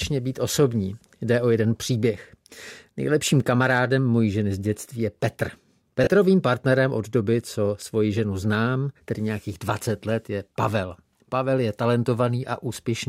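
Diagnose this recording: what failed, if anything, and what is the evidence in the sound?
A brief noisy smear replaces the sound from 6.04 to 6.07 s, about 30 ms, fitting three 10 ms lost LE Audio frames; the LC3 decoder refilled the gap from the previous spectrum with random signs.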